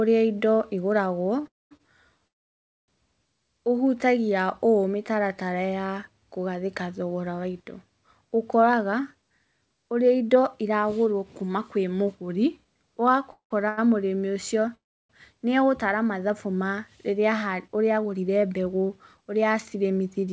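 A call audio freeze comes first, from 1.47 to 1.73 s. The last sound buzzes briefly and then falls silent. A short stall from a late packet follows at 1.77 to 1.81 s, briefly holding one sound too long. Another freeze runs from 2.27 to 2.90 s, mostly silence. From 8.62 to 12.66 s a jitter buffer speed-up plays the speech about 8% fast at unchanged pitch. Tiny pitch-period slices are dropped, about a third of a second in total, so it sounds hurried. Freezes recur at 13.32 to 13.52 s and 14.75 to 15.11 s. A stall at 13.68 to 13.79 s stretches a sound by about 90 ms, with a slight buzz or dip. Each freeze likely comes from held-up packets draining the buffer. The audio then resumes where it stopped, with nothing lost. From 17.19 to 20.28 s a second speed-up runs about 9% fast, again trimming roughly a third of a second.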